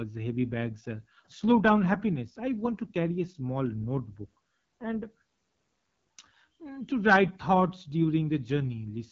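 From start to end the speech carries AMR wideband (HD Voice) codec damage, and it is plainly audible. At this rate the vocal tract model and its pulse excitation have too few bits to follow the voice, so vowels turn rough and raspy, a texture that fits the 8.85 kbit/s mode, one of the two lowest. Above 6.4 kHz the codec sends only shaped noise, and nothing sounds above about 7.5 kHz.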